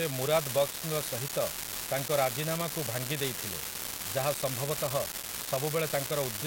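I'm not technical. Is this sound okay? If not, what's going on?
No. Two faults are audible in this speech recording.

The first is an unreliable data bit, present for the whole clip. One of the wires or lines carrying the digital sample values is not working reliably, so one bit of each number is sometimes wrong. Each mistake makes a jump of the same size. Together they form a steady crackle or fizz that continues through the pauses between phrases, where you would expect silence.

The second is a corrupt frame decoded, from about 1.28 to 1.31 s. The audio was stored in compressed form, in short blocks called frames. One of these blocks was damaged, but the player played it anyway. It misread the damaged data and put sound at the wrong pitches for that instant. You hear a brief blip or squeak, about three hundredths of a second long, that does not belong to the speech.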